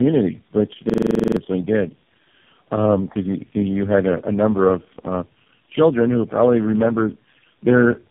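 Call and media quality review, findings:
Rough, muffled, warbly speech throughout, nothing above 3.5 kHz. Tandem speech coding: four speech codecs in a row (AMR-NB, two GSM full rate legs, AMR-NB again at a lower rate) with G.711 hops between. Each transcode re-degrades the previous codec's output.

Machine-gun stutter from 0.90 to 1.37 s, one 42.7 ms fragment repeating 11 times at about 23.4 Hz. System hang loop: host or driver froze while playback cycled the ring buffer, which fits a 2048-sample buffer. Roughly half a second of audio lost.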